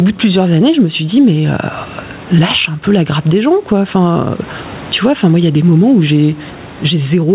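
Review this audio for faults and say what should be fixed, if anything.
Gain pumping runs through the whole clip. The microphone gain is likely set far too high, so a fast limiter clamps down on every loud stretch and releases in the gaps. The gain swings by around 20 dB, squashing loud and soft parts together. Turning the input gain down until the limiter barely acts would prevent it.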